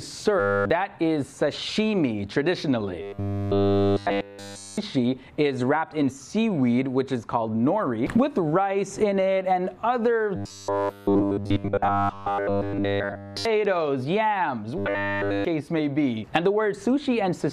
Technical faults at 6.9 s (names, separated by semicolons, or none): none